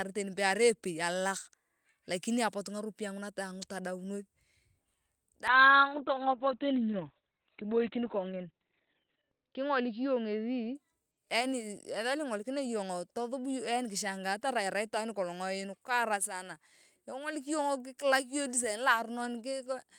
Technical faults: call bitrate drop

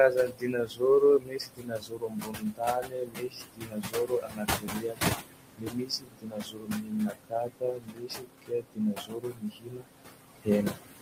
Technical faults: noise suppressor artifacts; speech cut by the noise suppressor

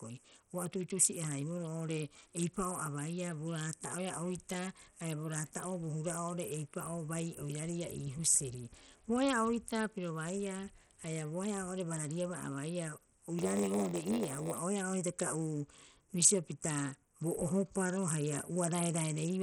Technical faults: Bluetooth SBC compression; block size mismatch (padded)

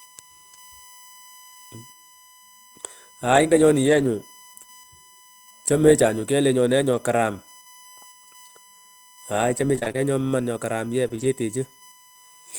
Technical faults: USB whine; short concealed packet loss; lost packet rebuilt from error correction; repeated packet loss (robotic sound)

